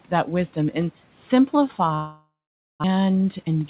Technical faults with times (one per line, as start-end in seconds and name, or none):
1.94-2.86 long network dropout
2.94-3.64 jitter buffer speed-up